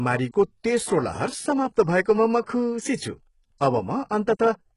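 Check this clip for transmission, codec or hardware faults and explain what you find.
Two faults are present: codec damage across the whole speech recording, plus three brief pre-echo events.

HE-AAC compression, throughout: The top of the spectrum sounds synthetic. Sibilants come out gritty and lispy, with a metallic sheen, and nothing is present above about 11.1 kHz. The likely cause is HE-AAC coding at a very low rate, consistent with roughly 12 kbps. Only the lower band is really encoded. The treble is rebuilt by copying lower bands upward under a coarse envelope, so its harmonics don't match the real voice and the damage is heavy.

Pre-echo, at 0.32–0.34 s (just before "तेस्रो लहर"), at 2.45 s, and at 3.58–3.61 s: A short hiss leads each sharp onset by about 20 ms, 17 ms and 27 ms respectively, and the attacks sound softened and smeared. The codec spreads quantisation noise evenly across each transform block. 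When a strong onset lands late in a block, noise scaled to that loud moment also fills the quiet stretch before it and is heard ahead of the sound.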